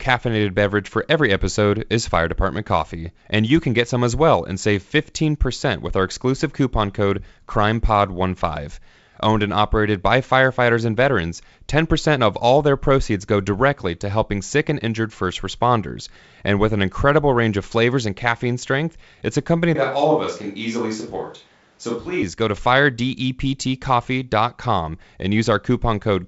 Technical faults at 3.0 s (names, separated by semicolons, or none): none